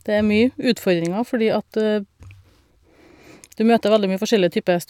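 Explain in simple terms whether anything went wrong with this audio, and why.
Nothing went wrong with this speech recording.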